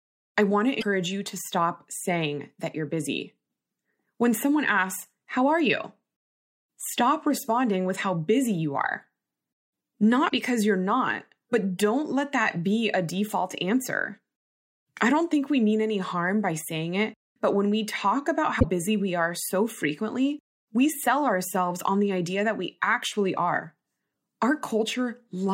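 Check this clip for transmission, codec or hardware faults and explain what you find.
The speech carries three short bursts of damaged data in a compressed stream: 0.77 to 0.83 s, after "I want to"; 10.26 to 10.32 s, before "because you're not but"; and 18.56 to 18.64 s, between "when we talk about" and "busy we are so". Corrupted bytes make the decoder misread frames and lose sync until it finds the next valid header, giving a brief chirp, squawk, click or short hole lasting 60 to 80 ms.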